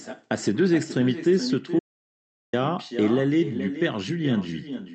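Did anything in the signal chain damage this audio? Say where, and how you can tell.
Yes. At the call-processing stage, the far end has no working echo canceller: its loudspeaker output is re-captured by its microphone and sent back across the network. Throughout the clip, the talker's speech is trailed roughly 0.4 s later by a duller copy sitting about 11 dB below the direct voice. That fixed lag and the filtered tone of the copy are what identify it as echo with no canceller.

There is also an audio dropout to silence from 1.79 s to 2.53 s, about 0.74 s of missing signal. The speech stops mid-flow and resumes abruptly, and the gap is silent with no room tone or noise floor underneath, unlike a natural pause. That points to the input feed being lost while the recorder kept writing silence, likely a momentary device disconnect or link failure upstream of the encoder. Whatever was said in that window is unrecoverable.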